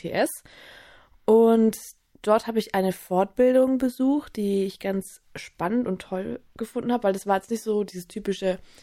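No technical faults can be heard in this audio. Nothing in the recording or playback chain stands out as having gone wrong at any point.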